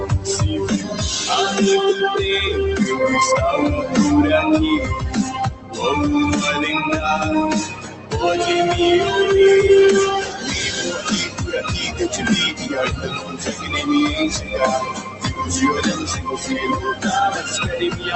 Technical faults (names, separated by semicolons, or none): noise suppressor applied to music or sounds; sound cut by the noise suppressor